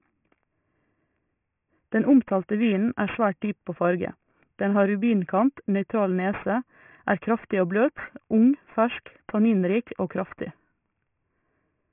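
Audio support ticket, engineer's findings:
Gritty, metallic sibilants through the whole speech clip; hiss sounds folded into wrong pitches, spectrum packed hard against 3 kHz. Aliasing from a sample-rate converter decimating without an anti-alias filter, fitting a 6 kHz target rate. Folded energy roughly 20 dB under the speech.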